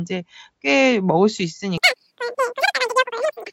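A wrong sample rate hits this speech clip from 1.78 s to the end at 3.53 s: the samples play back with no rate conversion at about 2.76 times their intended speed, which fits 16 kHz audio played at 44.1 kHz. The voice turns chipmunk-like and rushed, raised about 17.6 semitones.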